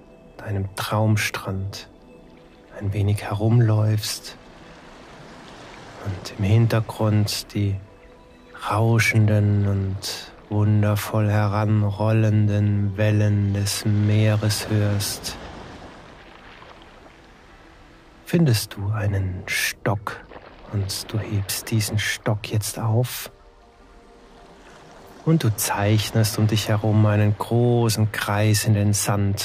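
Nothing here calls for comment, since the audio runs along without a single fault that a listener would pick out.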